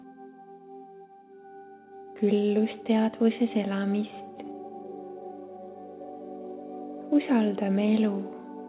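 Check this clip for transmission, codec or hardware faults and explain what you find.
Nothing stood out on listening; the audio has the narrow telephone-band sound of a G.711 call path, with nothing above about 4 kHz, and no event in it calls for comment.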